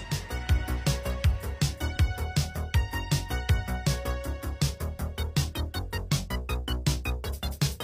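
A short burst of misplaced energy, a brief glitch, appears from 1.90 to 1.97 s: a corrupt frame decoded. Damaged bits in roughly two compressed frames were played anyway, so misread codes spread energy across wrong frequencies, peaking around -30 dBFS.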